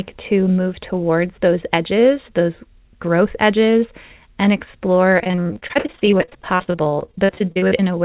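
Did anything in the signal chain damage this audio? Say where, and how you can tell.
Yes, at the network stage: repeated packet loss (robotic sound) runs from 5.18 s to 7.88 s, right after "growth edges and explore". Dozens of packets dropped or arrived late, with gaps up to 52 ms. Concealment stretched the last sound across about a third of that span, so the audio turns choppy and robotic, with pieces missing.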